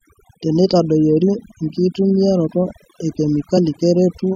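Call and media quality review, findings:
Overdone noise removal, whole clip: noise suppressor set too aggressive, cutting individual frequency bands to near zero wherever they sit close to its noise estimate. Background drops and breaks up into twinkling specks; quieter speech components removed with it.

Compressed frames skipped, 1.89–1.92 s and 3.57 s: decoder output missing whole frames of roughly 23.2 ms. Jumps of about 50 ms and about 20 ms point to two frames and one frame lost.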